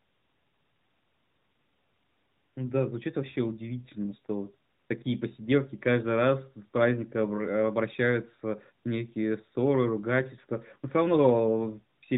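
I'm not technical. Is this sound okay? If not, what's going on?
Yes, nothing's going wrong in this speech recording; it just has the narrow, phone-call sound you'd expect from a mobile line.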